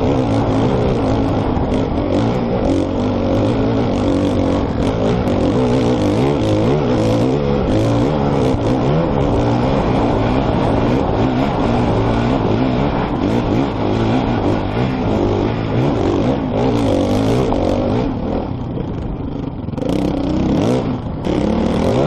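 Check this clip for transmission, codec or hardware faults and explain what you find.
One transmission fault recurs three times: overlap between stream segments, at 1.29 s, 5.28 s and 9.27 to 9.29 s. Timestamps on adjacent 2.0 s segments claim shared time, so the player trims about 20 ms of sound that was never duplicated. The waveform jumps across the gap, heard as a brief click or tiny skip roughly every four seconds.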